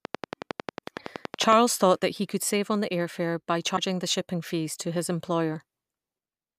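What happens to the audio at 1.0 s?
At about 0.99 s there is damaged data in a compressed stream: the decoder misreads the corrupted frame, loses sync and jumps to the next header, giving a brief glitch. This falls within a train of clicks running from 0.05 to 1.54 s, ending just before "thought he could save". It is a regular ticking at about 10.9 clicks per second, roughly fifteen pulses standing about 15 dB above the speech, likely from nearby interference.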